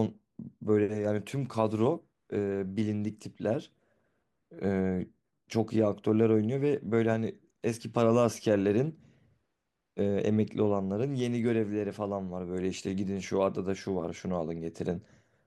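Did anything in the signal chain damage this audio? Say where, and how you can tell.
Yes. DAB burbling at the codec stage, from 10.99 to 11.35 s of the speech: a brief patch of burbling blips over the sound. Weak reception let bit errors, a fraction of a percent, into the MP2 data, and wrong samples put short blips of noise in single sub-bands.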